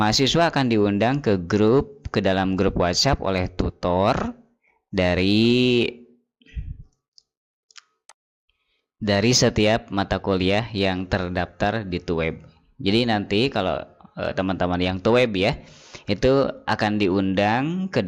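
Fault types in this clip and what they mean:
No technical faults are audible anywhere in this recording.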